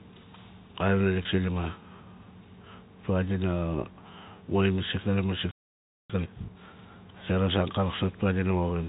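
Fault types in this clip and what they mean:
Packet loss with pitch repetition: At 1.23 s about 20 ms of audio goes missing, which fits two lost packets, and the receiver bridges the gap by repeating the last pitch period. It sounds like a brief, slightly held buzz. On a waveform the short stretch shows near-identical repeated cycles. On a spectrogram it appears as a thin band where the harmonics freeze flat instead of moving with the speech.
Playback stall: From 5.51 to 6.10 s the output goes completely silent for about 584 ms, cutting the speech off in mid-flow. The likely cause is the player running out of buffered data or its thread being blocked. A waveform shows a flat line across this span, and a spectrogram shows a blank vertical gap with abrupt edges on both sides.
Time-compressed catch-up: From 6.10 to 6.68 s the player works off the backlog from the stall by cutting out small pieces and cross-fading the rest, so the speech runs at twice normal speed without any rise in pitch. 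It sounds hurried. On a spectrogram the syllables look squeezed together horizontally while the harmonic spacing stays the same, and splice points may show as faint discontinuities.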